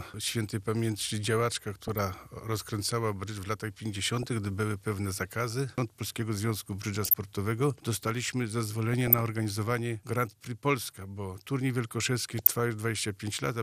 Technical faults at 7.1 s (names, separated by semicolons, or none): MP2 compression; DAB burbling